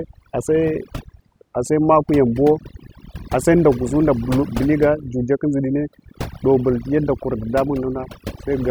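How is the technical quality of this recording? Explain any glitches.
The recording suffers from overdone noise removal, present throughout. A noise reduction stage set too aggressively suppresses individual frequency bands that sit near its noise estimate, taking quiet parts of the speech along with them. The background drops and breaks up into twinkling specks.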